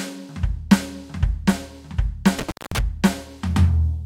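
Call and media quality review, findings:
Intermittent contact, 2.39–2.80 s: music cuts out for 206 ms, crackle at edges; loose cable or plug. Waveform gap; spectrogram shows broadband vertical spikes flanking faint hiss.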